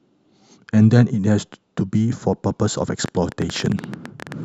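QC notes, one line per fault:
3.06–4.33 s, train of clicks: likely outside interference injecting repeated pulses, heard as some 20 similar clicks, unevenly spaced at 13.5 per second, about 10 dB above the speech.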